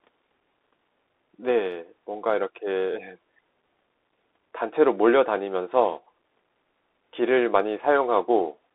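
A speech clip carrying Bluetooth CVSD headset codec damage from start to finish. The audio is confined to a narrow telephone band of roughly 300 Hz to 3.6 kHz, consistent with a 64 kbit/s CVSD link. That codec sends a single up-or-down bit per sample with an adaptive step, so fast, loud high-frequency content outruns the step and distorts. Here that is plainly audible as scratchy sibilants and a granular hiss beneath the speech.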